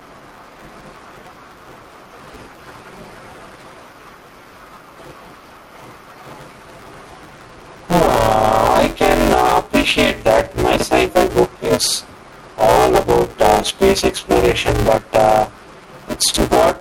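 Throughout the speech, the gain swings by about 10 dB, squashing the dynamics. This gain pumping is likely from input gain set far too high, with a fast limiter clamping every peak.

Also throughout, a robotic 188 Hz buzz rides on the speech and vanishes in silence. This is buffer tearing: the writer and reader of a ring buffer, which fits a 256-sample buffer, cross inside every period, so roughly half of each buffer holds audio from about 10 ms earlier, with hard joins on both sides.

From 10.76 to 10.82 s, and again from 16.28 to 16.36 s, the speech briefly garbles. These are chunks out of order: a 20 ms chunk plays late, two chunks behind at the first spot and three at the second, leaving three hard joins each time.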